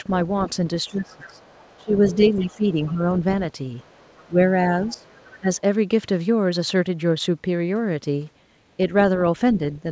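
From 0.85 to 2.9 s a faint second voice sits behind the speech, roughly 25 dB down: the other side's voice leaking through. It is likely the residue a loudspeaker returns into the microphone when echo cancellation leaves part of the far end behind. Over almost the same span, 0.88 to 2.99 s, the near talker is pulled down in pieces, dipping by around 20 dB for a total of about a second and a half. That is speech suppressed in double talk, likely caused by the canceller failing to tell its own talker from the echo while both sides spoke and attenuating the whole mixture. From 3.78 to 5.4 s the leak returns, quieter at roughly 30 dB below the speech. Between 4.26 and 5.49 s the near talker again drops by around 20 dB, now for under half a second in total, as the suppression repeats more briefly. Throughout, the sound stops at 8 kHz, which fits a G.722 call path at 64 kbps.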